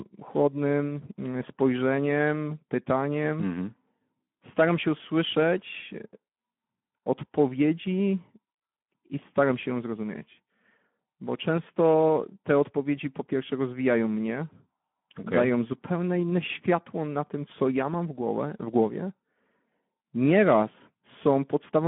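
Speech runs through Speex codec damage for its whole length: the voice sounds hoarse and noisy because the CELP excitation is starved of bits, which fits roughly 11 kbps. Sound is confined to about 150 Hz to 3.4 kHz, and that harsh grain, rather than the swirling, metallic warble of low-bitrate transform codecs, marks it as Speex.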